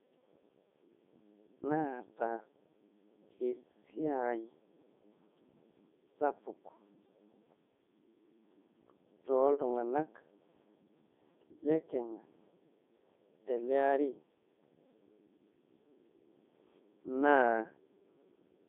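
It's speech run through the Codec 2 vocoder the whole way, and it sounds it: robotic and buzzy, squeezed into a 200 Hz to 3.6 kHz band. Since the decoder rebuilds the voice from sine waves rather than keeping the waveform, the damage is heavy, even in the 3.2 kbit/s mode.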